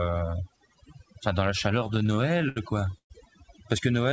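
Speech, carried over a call link whose band stops at 8 kHz, which fits a wideband codec such as G.722. Overdone noise removal runs through the whole clip. The suppressor was set too hard. It pulls individual frequency bands down whenever they sit near its noise estimate. The background drops and breaks up into twinkling specks. Softer parts of the voice vanish too. Repeated stalls (stutter) begin right after "enfin dans la", from 1.80 s to 3.12 s. Packets arrived late, and the jitter buffer ran dry many times. Each time, the receiver stretched the last sound until data came back, fading it in the longer waits. The fill adds up to about 340 ms, a quarter of that stretch. The longest hold lasts 118 ms. Nothing is lost, but the voice drags and stutters.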